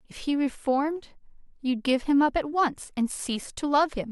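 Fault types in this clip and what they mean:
No audible technical faults turn up in this recording.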